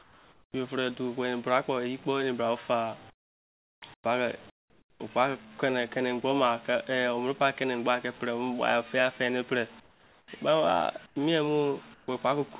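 From 0 to 0.54 s, and again at 3.1 to 3.82 s, 3.94 to 4.04 s, 4.5 to 5.0 s, 9.8 to 10.28 s, 11.06 to 11.16 s and 11.94 to 12.08 s, the pauses turn to flat, featureless hiss about 8 to 28 dB quieter. This is comfort noise in place of the background, likely from discontinuous transmission, where the receiver synthesises noise while no speech is sent. It is heard over a call path that carries nothing above 4 kHz.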